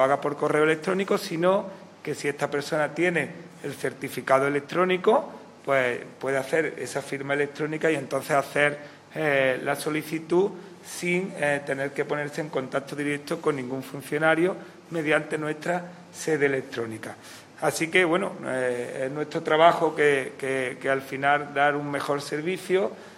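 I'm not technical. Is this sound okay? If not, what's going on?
Yes, nothing in this recording points to a technical problem with how the sound was captured or carried.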